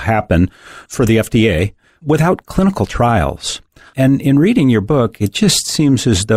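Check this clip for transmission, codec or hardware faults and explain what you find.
Nothing wrong can be heard in the signal: the speech comes through as a steady, continuous recording with no disturbance at any point.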